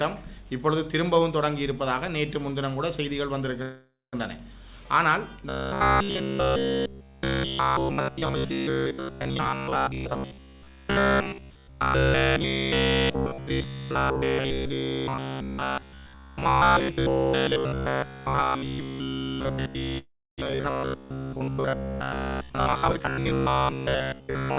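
The audio stops for about half a second at 3.62 s, trailing off into roughly 150 ms of silence before resuming at 4.15 s, and again at 19.98 s, with about 300 ms of silence before it picks up at 20.40 s. Both are a call audio freeze. The jitter buffer most likely ran dry while packets were held up in transit. The receiver stretched the last sound, and when the audio resumed it carried on from where it had stopped. These gaps of about 505 ms and 398 ms push the rest of the clip later rather than dropping anything. From 5.49 s to the end, the sound turns into a rigid metallic buzz locked at 66.8 Hz. This is robotic sound from repeated short buffers. Audio was likely arriving too seldom, so the player looped its last fragment, about 15 ms long, to fill the time while fresh material was skipped, and essentially all of this stretch is repetition. From 9.35 to 11.58 s, and again from 22.47 to 23.01 s, the audio hurries along at 123% and then 144% of normal speed with its pitch unchanged. 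This is a jitter buffer speed-up: to shed excess delay, the receiver cut out many short pitch-period pieces, around half a second in the first stretch and about 0.3 s in the second. Throughout, nothing sounds above 4 kHz, which fits a G.711 mu-law call path.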